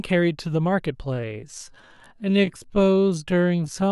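A time-stretched section runs from 1.0 s to the end of this speech clip, where the pace abruptly drops to about 0.63 times normal while pitch holds steady. Slowed this way, the sound drags, likely from software repeating short fragments to lengthen the audio.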